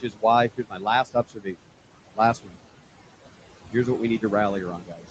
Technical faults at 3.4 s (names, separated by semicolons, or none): noise suppressor artifacts